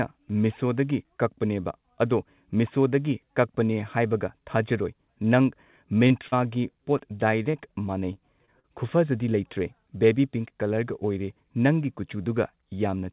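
Short concealed packet loss occurs at 6.08, 6.28, 6.98, 7.43, 7.51, 8.13, 8.46 and 8.59 s. Each time, 20 to 40 ms of speech arrived too late to decode. The receiver extended the preceding sound to fill the gap, leaving brief smears or wobbles in speech already limited to 4 kHz by the call codec.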